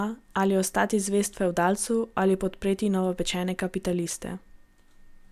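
Nothing in this bit of speech trips any alarm; there are no faults to point to at any moment along the way.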